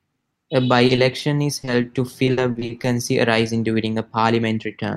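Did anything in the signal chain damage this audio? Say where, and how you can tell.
Yes, the network stage dropped audio. Short concealed packet losses occur at 0.87–0.91, 0.95–0.99, 1.19–1.23, 1.61–1.69 (two back to back) and 1.81–1.85 s. Each time the decoder extended the preceding speech to cover about 20 ms, heard as brief smears or wobbles.

From 2.25 to 2.85 s, repeated packet loss gives a robotic sound. Holes arrive in quick succession, the longest about 60 ms, with about a third of that stretch synthesised rather than received. The constant patching makes the speech choppy, with fragments missing.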